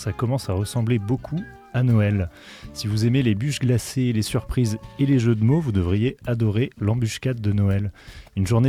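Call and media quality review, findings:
No faults found in this clip.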